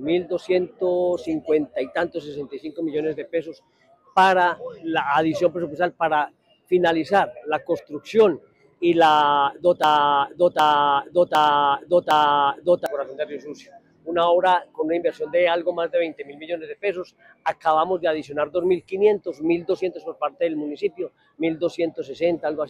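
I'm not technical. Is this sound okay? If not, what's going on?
No. From 9.84 to 12.86 seconds there is a broken-record loop: the same 0.76-second piece plays four times back to back, likely because playback stalled and resent its last fragment. Unlike an echo, each repeat is identical, and the audio meant for that stretch is missing.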